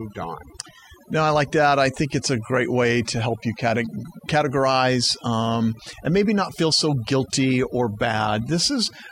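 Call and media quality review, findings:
Overdone noise removal, throughout: suppressor set too aggressive, gating bands near its noise estimate along with quiet speech detail. Background drops, breaking into twinkling specks.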